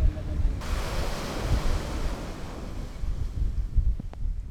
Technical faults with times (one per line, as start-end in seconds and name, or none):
4.00-4.16 loud pop